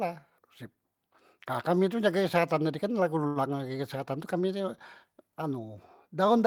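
A short stall from a late packet occurs at 3.27 to 3.38 s in this speech. A packet failed to arrive on time, so the jitter buffer ran dry and the receiver filled the gap by extending the last sound for about 83 ms. When the packet finally arrived, playback resumed exactly where it had left off. Nothing is lost, but everything afterwards runs 83 ms late, and the held sound comes across as a brief drawn-out smear with a faint buzzy dip.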